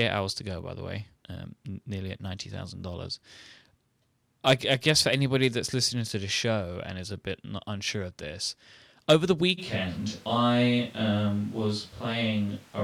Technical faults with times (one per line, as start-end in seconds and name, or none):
9.60-12.83 switch to a distant microphone